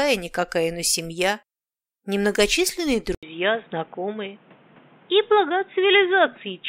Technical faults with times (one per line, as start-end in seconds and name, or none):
3.15-6.68 input switched to a poorer device